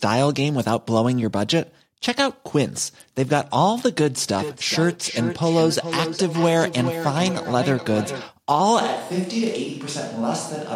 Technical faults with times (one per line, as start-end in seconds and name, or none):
4.38-8.34 feedback echo between two devices
8.81-10.75 switch to a distant microphone